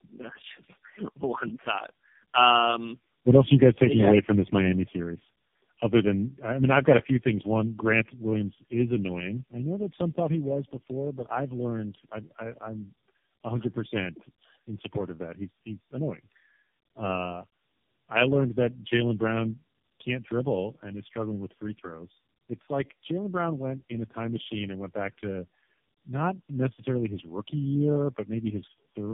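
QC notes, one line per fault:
Throughout, tandem speech coding: the speech sounds rough, muffled and warbly, with nothing above 3.5 kHz. The character points to three low-rate speech coders in a row, likely a G.729A stage followed by two AMR-NB stages at about 6.7 kbit/s, joined by G.711 links. At each border the signal is decoded and coded again, so every coder models the previous coder's errors, and the distortions compound.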